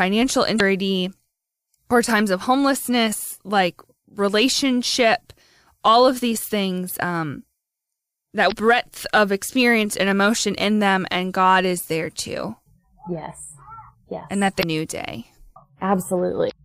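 Speech clip with damaged data in a compressed stream at four points: 0.56–0.61, 8.48–8.52, 14.59–14.64 and 16.47–16.53 s. Each lasts roughly 40 to 50 ms. Corrupted bytes made the decoder misread frames and lose sync. A brief burst or gap results.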